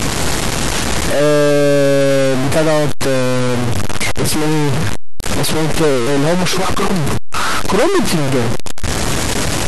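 Speech, with a harsh, buzzy distortion running the whole way through, and the pauses never go quiet; they're filled with a gritty noise sitting high up, around -10 dBFS. That points to a stuck bit, most likely a fairly significant data bit jammed at one value by a broken line or converter.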